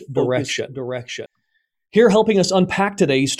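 From the start to 1.26 s there's a doubled audio track: a second copy of the speech, a few dB quieter, trails about 0.7 s behind, then cuts off abruptly, likely from a slower capture path.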